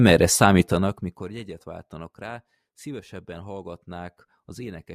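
Between 0.60 and 1.34 s, a gain reduction of around 20 dB is applied in unsmoothed 1 dB jumps, roughly fifty a second, instead of as a continuous ramp. Each jump leaves a small discontinuity in the waveform, so the fade carries zipper noise: a fast, fine ticking buzz riding on the speech while the level drops, ending just before "váltanak rá szívesebben".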